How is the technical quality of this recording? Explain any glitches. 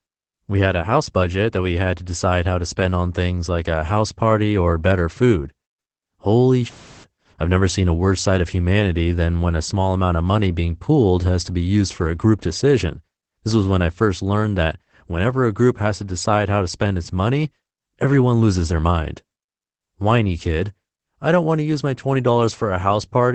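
The recording's quality is held back by one steady problem: Opus voice compression runs the whole way through. The speech has nothing above about 8.6 kHz, so it sounds muffled, and there's an audible hoarse, slightly robotic edge. That fits SILK's wideband mode at a low rate near 12 kbps, where the excitation is coded coarsely in 20 ms frames.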